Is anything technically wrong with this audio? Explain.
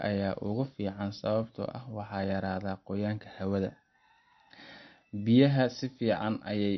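Yes. Throughout, the speech sounds watery and dull, with nothing above 5.9 kHz, most likely MP3 compression, which fits a low bitrate near 35 kbps.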